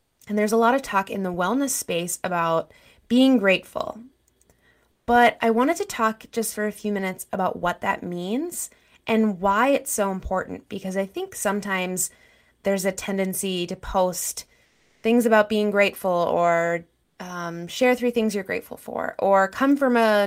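Speech, with comfort noise in place of the background three times: 0.00–0.19 s, 14.65–15.03 s after "a tendency to post", and 17.03–17.17 s before "um share three things". The room tone turns flat and featureless, shifting about −3, +2 and −2 dB. Likely cause: Opus DTX filling pauses with synthetic noise.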